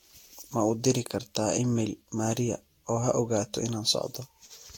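Speech, with generation loss throughout. The sound is swirly, smeared and hollow, with blurred consonant attacks, likely from about seven successive Vorbis encodes at roughly 72 kbit/s. A spectrogram shows patchy spectral holes, smeared onsets and nothing above 19.4 kHz.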